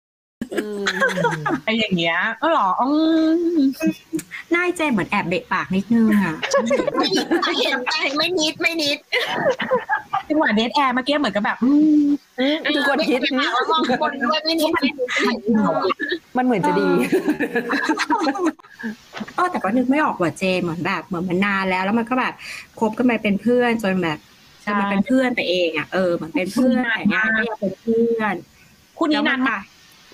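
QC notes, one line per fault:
0.00–0.42 s, cut-off start: capture or streaming began late, so the clip opens on silence and then drops straight into a sound already under way at 0.42 s. There is no natural attack or fade-in, so the entry sounds abrupt and truncated.
17.35–17.42 s and 26.79–26.86 s, short concealed packet loss: about 40 ms of audio failed to reach the decoder in time at each point. The receiver filled the gap by extending the preceding sound, as pitched continuation or shaped noise, then blended back into the real signal, which leaves a brief smear where detail is lost.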